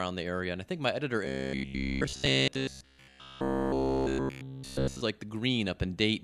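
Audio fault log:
1.25–5.01 s, robotic sound from repeated short buffers: after "I think my editor", all the speech becomes a rigid metallic 66.7 Hz buzz, likely from a 15 ms chunk repeating; this shows as evenly spaced harmonic stripes on a spectrogram and identical repeating cycles in the waveform.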